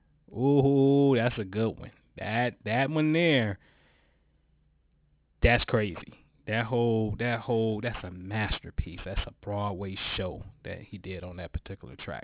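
From start to finish the speech has a gritty, metallic edge on sibilants, with harsh tones that don't belong to the voice, sitting about 20 dB below it, and the spectrum runs right up to a hard edge at 4 kHz. This is aliasing: the rate was cut, which fits a drop to 8 kHz, without first filtering out content above 4 kHz, so those higher frequencies folded back down to wrong, unrelated pitches.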